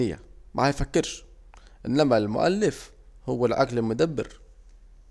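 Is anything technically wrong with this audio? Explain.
No, nothing technically wrong turns up in this bit of speech, so there's really nothing to flag here.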